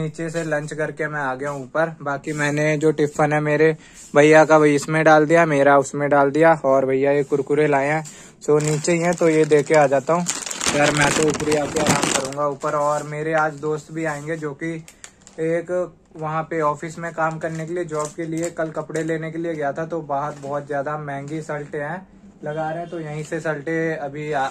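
No technical faults can be heard anywhere in the recording, and the signal holds steady throughout.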